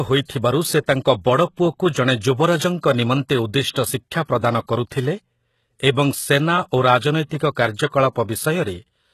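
Speech whose s sounds come out gritty and lispy throughout, with nothing above 12.3 kHz, is likely HE-AAC compression rebuilding treble from copied lower bands, which fits a very low bitrate near 16 kbps.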